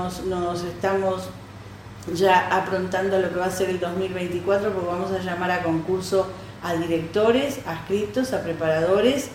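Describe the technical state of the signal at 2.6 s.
At 2.6 s the signal is intact, with no dropout, clipping, distortion or other fault audible at that point.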